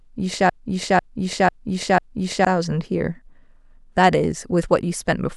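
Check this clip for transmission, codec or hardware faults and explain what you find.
One fault is present: a broken-record loop from 0.50 s to 2.45 s. The playback or streaming path likely stalled and kept replaying the last fragment it still held. A slice of speech about 0.5 s long repeats exactly, back to back, four times. It produces a stuttering, mechanical cycling of the same syllables with an identical rhythm on each pass. The speech that should have filled those two seconds never arrives and is lost outright.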